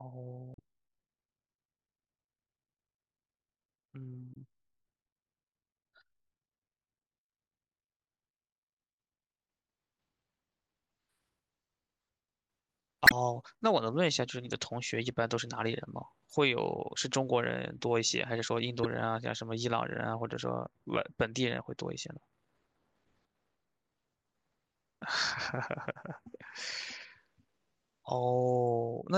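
Damaged data in a compressed stream at 0.54–0.59, 4.32–4.37, 13.04–13.12, 16.30–16.34 and 18.83–18.86 s: corrupted frames make the decoder lose sync, giving brief chirps or blips in the speech.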